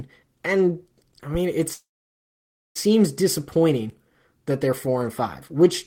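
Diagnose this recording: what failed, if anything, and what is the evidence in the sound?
There's a call audio freeze in the network path, running from 1.73 to 2.77 s. The sound just stops moving forward: the last bit carries on briefly, then drops to near-silence for about 0.92 s of that one-second stretch. When it resumes, the speech picks up right where it left off, so nothing's lost, but everything after sits about a second later. That points to packets likely stalling in transit and the jitter buffer running dry.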